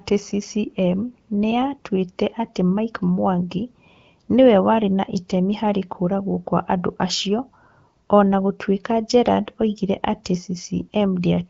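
No technical faults can be heard in this speech.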